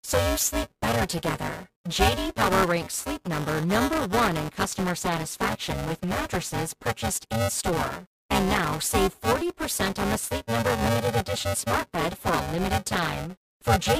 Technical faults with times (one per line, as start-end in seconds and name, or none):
0.00-13.99 buffer tearing